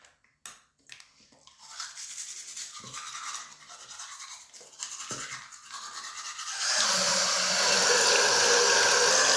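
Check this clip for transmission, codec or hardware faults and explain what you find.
One fault turns up, a wrong sample rate near the end. From 6.84 to 9.11 s, the audio plays slower than it was captured, with no rate conversion, consistent with 24 kHz material run at 22 kHz. The sound drags to about 0.92 speed and drops about 1.5 semitones.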